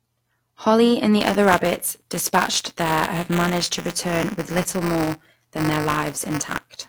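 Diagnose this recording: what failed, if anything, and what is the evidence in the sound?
Buffer tearing at the driver or buffer stage. From 1.20 s to the end, the speech carries a steady robotic buzz at 200 Hz. Writer and reader have slipped, so every 5 ms period holds a small slice of older audio, hard-joined on both sides.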